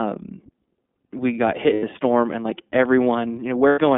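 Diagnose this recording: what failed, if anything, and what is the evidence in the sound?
The iLBC codec colours the whole recording, so the failure sits at the codec stage. The audio is confined to a band of roughly 200 Hz to 3.6 kHz, with nothing above it. The speech has a plainly audible rough, slightly synthetic edge, because each frame's excitation is coded on its own at a low rate. The character fits the 13.33 kbps mode with 30 ms frames.

Lost iLBC frames occur at 1.74 to 1.84 s, between "we got hit" and "storm and like", and again at 3.69 to 3.78 s. Each gap lasts about 90 ms, consistent with three 30 ms frames dropped on the network. The decoder fills each hole by repeating the last pitch cycle blended with noise, which sounds like a held, faintly buzzy vowel. Because iLBC frames are independent, normal speech resumes almost at once after each gap.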